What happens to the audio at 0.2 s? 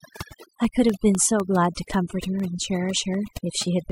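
Periodic USB or driver dropouts: a background task stalls the audio path every 0.25 s from 0.15 to 3.90 s, dropping about half a millisecond of sound as silence and leaving regular ticks. Overdone noise removal runs throughout: an overly aggressive noise reducer cuts frequency bands near its noise estimate, so the speech sits over a near-silent, twinkling background.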